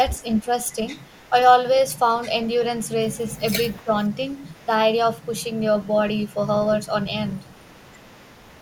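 From 0.13 to 1.3 s, a faint delayed copy of the speech trails the talker. This is an echo leak. It sits about 30 dB under the voice and lags by 229 ms. The likely cause is a far-end loudspeaker whose echo canceller let part of the pickup back down the line. The same echo returns from 1.94 to 4.66 s and from 5.21 s to the end, with the same delay.

Inside the first echo stretch, between 0.28 and 0.52 s, the voice briefly dips by around 10 dB. This is speech suppressed in double talk. The canceller likely could not tell the talker from its own echo while both sides spoke, so it pulled everything down. A second, deeper dip of around 15 dB falls between 3.39 and 3.91 s. Each time, only a short piece of the voice is affected.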